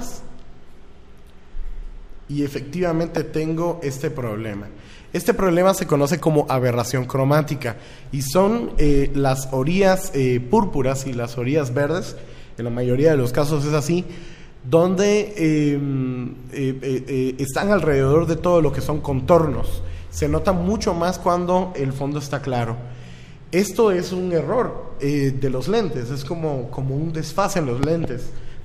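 A loud pop hits at 3.17 s, and a double pop at 27.83 to 28.06 s, both well above the surrounding level. The likely cause is a voltage spike, and the sound continues underneath rather than cutting out.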